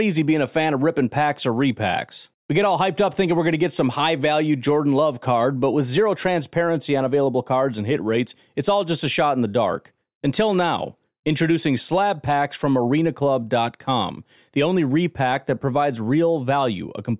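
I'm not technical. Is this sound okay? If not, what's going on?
Yes, nothing stood out as a problem when listening to this recording.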